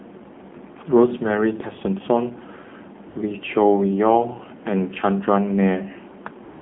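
From start to finish the speech sounds thin, buzzy and plainly synthetic, confined to roughly 150 Hz to 3.5 kHz. This is the AMR narrowband mobile codec: a vocal-tract model excited by sparse pulses, at a low mode that fits about 7.4 kbps.

At 3.10 to 3.16 s, and again from 6.44 s to the end, the real background drops out and is replaced by smooth, steady hiss. This is AMR comfort noise: the sender stopped transmitting speech frames, and the receiver synthesised noise from a coarse level and spectrum estimate.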